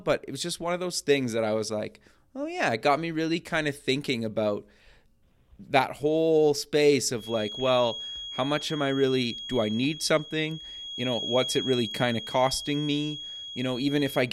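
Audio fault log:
7.11 s to the end, feedback whistle: from just after "that whole space", a thin, steady tone near 3.3 kHz sits about 10 dB below the speech, swelling and fading slowly in level. This is likely a loudspeaker-to-microphone loop held at the edge of feedback, sustaining one frequency without running away.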